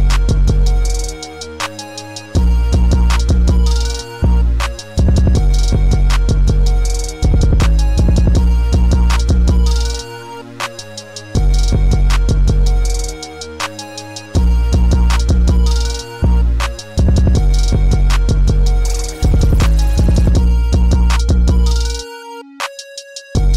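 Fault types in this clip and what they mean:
Nothing here to flag; I didn't hear a single technical fault anywhere in this one.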